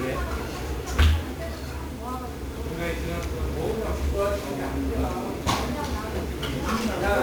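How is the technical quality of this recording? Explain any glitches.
The technical quality is poor, with one heavy fault that runs through the whole recording. Throughout the clip, the audio has been squeezed through 1-bit DFPWM compression, and the sound fits a stream of about 48 kbps. The encoder keeps only one bit per sample, telling an adaptive level to step up or down, so it can only approximate the waveform. That coarse stepping leaves strong broadband quantisation noise: everything is fuzzy and crackly, and the high end is buried under hiss.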